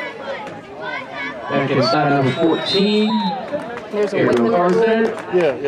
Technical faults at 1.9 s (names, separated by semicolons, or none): compressed frames skipped